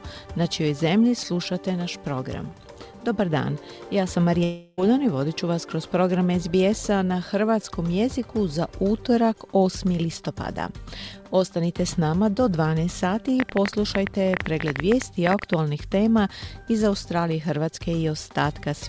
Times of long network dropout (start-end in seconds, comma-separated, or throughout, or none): 4.44-4.80